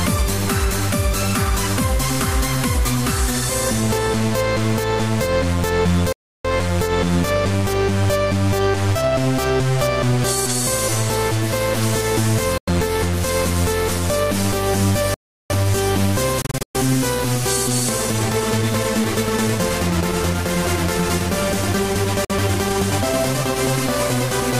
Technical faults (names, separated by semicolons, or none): playback stall; Bluetooth dropout